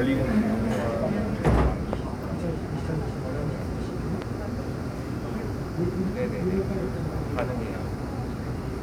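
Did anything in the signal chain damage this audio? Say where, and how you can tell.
Yes. Single loud pops at 1.93, 4.22 and 7.39 s, each about 20 ms long and well above the sound, which continues underneath. The likely cause is an analogue-stage voltage step, such as a plug, switch or static discharge, added to the signal.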